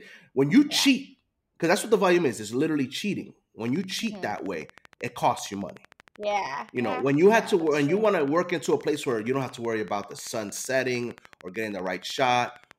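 Interference from nearby equipment or a faulty connection or power supply likely injects a train of clicks from 3.68 s, just after "is it's literally cheating", to 12.72 s. About a hundred evenly spaced pulses arrive at 13.1 per second, roughly as loud as the speech, ticking steadily over words and pauses alike.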